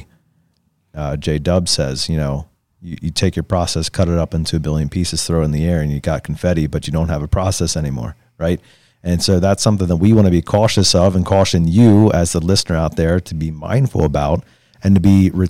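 Hard clipping breaks into the speech at 3.23 to 3.53 s and 9.29 to 9.68 s, overdriven by about 2 dB, then at 10.04 to 12.08 s by about 5 dB, 14.00 to 14.35 s by about 3 dB and 14.92 to 15.26 s by about 4 dB. Peaks exceed what the stage can pass and are sliced flat, giving crackly, bright fuzz. Unlike gentle saturation, the edge appears abruptly and is harshest in the long 5 dB stretch.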